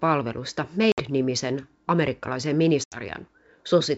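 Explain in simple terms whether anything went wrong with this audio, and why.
Two short gaps cut into the speech, around 0.92 to 1.03 s and 2.84 to 2.99 s. This is packet loss on an ADPCM call. A few packets went missing, leaving silent holes of 60 and 80 ms. The decoder's running prediction also lost track. Unlike a plain dropout, each hole is followed by slightly distorted speech that settles within some tens of milliseconds.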